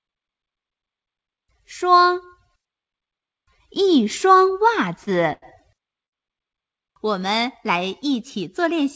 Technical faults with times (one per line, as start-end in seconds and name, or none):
5.04-5.44 short stall from a late packet
6.06-6.14 short stall from a late packet